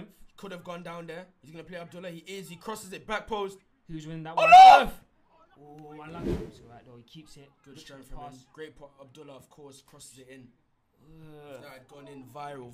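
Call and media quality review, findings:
No faults found: no dropouts, clipping, glitches or timing discontinuities detected anywhere in the signal.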